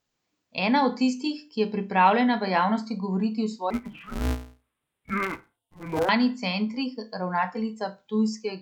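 From 3.70 to 6.09 s, just after "v javnosti govoriti o", the speech turns dull and robotic with a steady buzz near 188 Hz. That is interleaved audio read as planar: alternating left-right samples in each 5.33 ms block, which fits a 256-sample buffer, get split into halves, and the blocks are so short that there is no clear octave drop.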